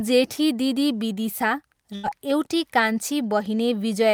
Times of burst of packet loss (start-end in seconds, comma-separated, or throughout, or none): 1.95-2.05